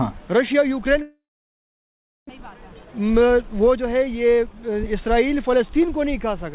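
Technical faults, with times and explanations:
1.02–2.31 s, long network dropout: the sound breaks off and the receiver stretches the last fragment into a short decaying buzz before settling into about 1.08 s of silence. This is likely a network outage in which no packets arrived. About 1 s of audio never plays, so when sound resumes it skips ahead past the lost part. The hole also adds roughly a third of a second of playout delay.
2.40–4.84 s, jitter buffer speed-up: the audio runs at 110% of normal speed for these few seconds while keeping its pitch, so it sounds hurried rather than higher. Having built up surplus delay after the gap, the receiver repeatedly cuts out tiny segments a pitch period or so long, shaving away roughly 200 ms in total. Because of the G.711 call path, there is nothing above 4 kHz.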